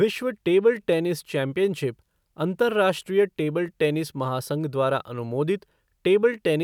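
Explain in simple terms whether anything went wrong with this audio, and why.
Nothing went wrong; no faults can be heard.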